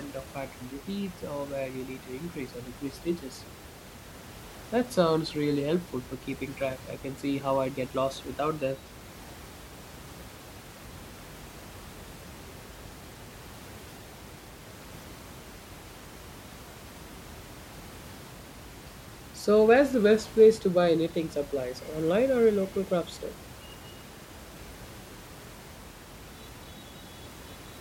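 No technical faults are audible in the speech, and the steady room noise sits about 19 dB below it as part of the original recording.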